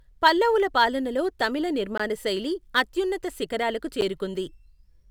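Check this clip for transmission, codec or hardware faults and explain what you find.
There are two short dropouts in the speech, both blocks of digital silence. The first hits at 1.98 s and lasts about 20 ms, the second at 4.01 s for about 10 ms. In each case a chunk of samples got zeroed out, the kind of thing you get when the output buffer isn't filled in time. The audio snaps to dead silence and back with no fade, so the first comes across as a short hole and the second, being under about 15 ms, as a tick or dip.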